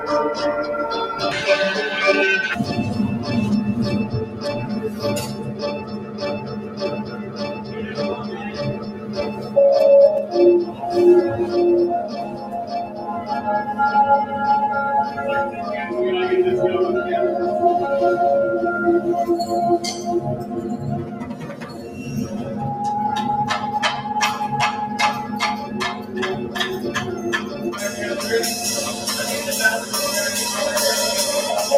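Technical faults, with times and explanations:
throughout: noise suppressor applied to music or sounds. The level pumps and flutters, with swings of roughly 10 dB. Sharp onsets punch through, but anything held or decaying thins out and sinks a moment later. A suppressor tuned for speech is left running on material it was not designed for. It treats steady tones, ambience and reverb tails as background noise and keeps pulling them down.
4.26–4.45 s, 4.85–9.56 s, 10.67–10.82 s, 12.25–12.51 s, 12.86–13.04 s, 20.36–22.35 s, 25.25–26.56 s and 27.16–27.65 s: sound cut by the noise suppressor. In these spans the sound dips by about 5 to 8 dB, with the deepest cuts near 8 dB at 4.85–9.56 s and 20.36–22.35 s, where it sags over long stretches. Here the suppressor judged sustained or fading material to be noise and attenuated it harder than the surrounding sound, cutting decays short.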